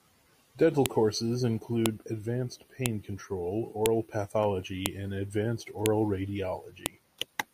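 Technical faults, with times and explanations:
0.86, 1.86, 2.86, 3.86, 4.86, 5.86, 6.86 s: file header played as audio. You get a short, hard click every second on the dot, right through the speech, and it doesn't care what the talker is doing; one lands just before "and advanced" and the next just after it. The audio was stitched together from 1-second pieces whose headers were never stripped, so those few dozen bytes of file metadata get played back as a burst of garbage samples at every seam.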